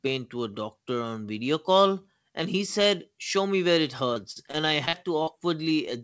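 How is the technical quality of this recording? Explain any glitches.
Quality is compromised by one stretch of repeated packet loss; the speech is band-limited with nothing above 8 kHz, which points to a wideband call codec such as G.722.

From 4.14 to 5.29 s, just after "me where it", repeated packet loss produces robotic, choppy speech: about 17% of that stretch is gaps up to 44 ms, each patched by extending the previous sound.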